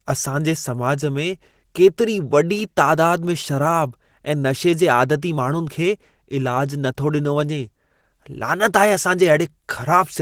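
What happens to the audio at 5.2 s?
At 5.2 s the speech carries Opus compression damage, as it does throughout. It sounds muffled, hoarse and grainy, likely from hybrid-mode encoding at about 16 kbps.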